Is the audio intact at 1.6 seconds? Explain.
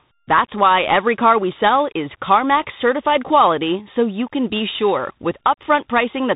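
No. At 1.6 s, as throughout, the speech carries tandem speech coding: it was decoded and re-encoded link after link, consistent with a G.726, G.711, then CVSD chain, each coder compounding earlier errors. It sounds rough and noisy, with nothing above 3.8 kHz.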